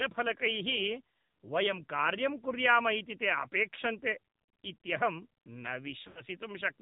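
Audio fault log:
throughout, AMR narrowband mobile codec: The speech was coded with AMR-NB at a low rate, which fits roughly 7.4 kbps. Nothing above 4 kHz survives, and the vocal tract model driven by sparse pulses makes the voice muffled, buzzy and plainly synthetic.
6.08 to 6.22 s, lost AMR speech frames: Radio errors corrupted a short run of frames, which fits four 20 ms frames, about 80 ms of speech. The decoder reused the last good pitch and vocal tract settings at falling gain, so the sound draws out and fades.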